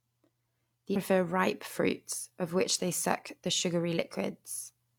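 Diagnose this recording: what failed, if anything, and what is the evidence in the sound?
Damaged data in a compressed stream, 0.92 to 0.97 s, just before "ripe fruits of which": a brief chirp, squawk, click or short hole in the speech. The decoder hit corrupted frames there, lost sync and skipped ahead to the next valid frame header.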